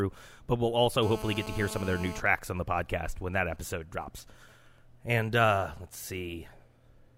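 From 1.03 to 2.20 s there's GSM phone buzz: a nearby 2G phone in a call is pulsing its transmitter 217 times a second, and the audio circuit rectifies those bursts into a steady, raspy 217 Hz buzz full of harmonics, sitting about 12 dB under the speech.

Then from 2.26 to 4.79 s it drops into GSM signalling bursts, with a phone on a call but its user gone quiet, so it only sends short groups of bursts. You get much fainter even ticks with a longer 217 Hz buzz twice a second, roughly 30 dB down.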